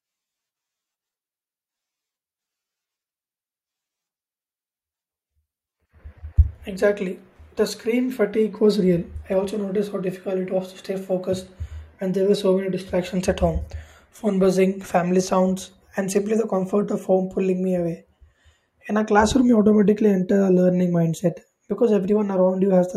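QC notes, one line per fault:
Throughout, resampler restarted on every block. A buzz at 50 Hz rides under the speech and stops in the pauses. The converter appears to process each 20 ms chunk in isolation, likely from a 48 kHz to 44.1 kHz conversion. At each chunk edge it lacks the true neighbouring samples, so a small error lands there. Those errors repeat every 20 ms. At that spacing they fuse into a low buzz rather than separate ticks.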